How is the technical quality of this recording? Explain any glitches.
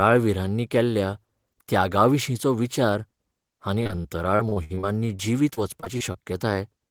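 The recording has two packet-loss faults, both in the second half.

From 3.83 to 6.42 s, repeated packet loss (robotic sound) leaves eighteen gaps, up to 61 ms each, patched by extending prior sound. The result is choppy, with smeared, repeated spectrogram slices and repeated waveform cycles.

From 6.88 to 6.90 s, a short concealed packet loss is filled by continuing the last sound. It gives a brief smear or wobble, visible as a blurred spectrogram sliver at the very end.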